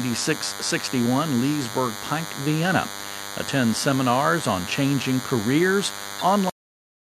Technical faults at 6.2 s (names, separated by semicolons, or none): DECT cordless phone buzz; MP3 compression; corrupt frame decoded